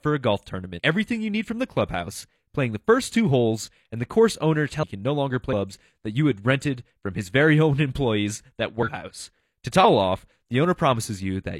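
Damaged data in the compressed speech stream makes the decoder lose sync, causing brief glitches of about 50 to 60 ms at 0.75, 4.79, 5.48, 8.83 and 9.80 s.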